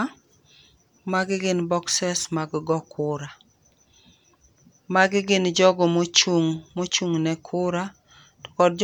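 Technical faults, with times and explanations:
No technical faults detected anywhere in the speech recording.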